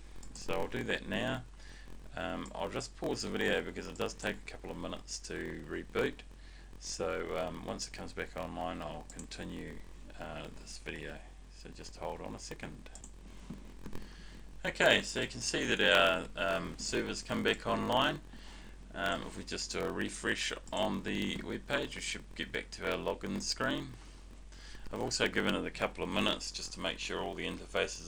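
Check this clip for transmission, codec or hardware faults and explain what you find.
A block size mismatch (padded) runs throughout the clip. One stage writes blocks shorter than the next stage reads, and the shortfall in each block is filled with zeros. The 43.1 Hz buzz fits a 1024-sample read block at 44.1 kHz. Each block carries a brief silent gap, so the audio has a steady 43.1 Hz buzz and plays about 6% slow (0.938×) while keeping its timbre.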